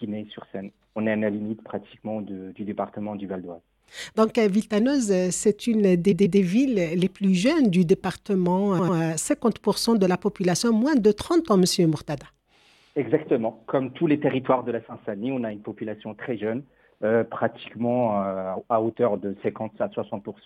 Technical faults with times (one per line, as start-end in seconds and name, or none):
6.11-6.39 repeated frames
8.78-8.96 repeated frames